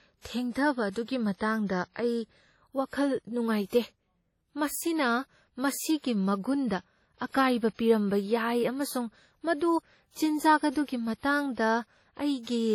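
From start to finish the speech carries heavy WMA compression damage: smeared, ringing transients, a washy hiss that breathes along with the voice, and nothing above 17.9 kHz. That's likely a transform encoder starved of bits, which fits roughly a 32 kbps setting.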